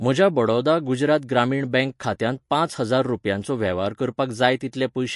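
From start to end, the speech has plainly audible codec damage, likely from MP3 compression at a low bitrate around 50 kbps. Treble stops sharply near 11.3 kHz, and faint spectral detail flickers between frames, giving a watery, swirly texture and smeared consonant attacks.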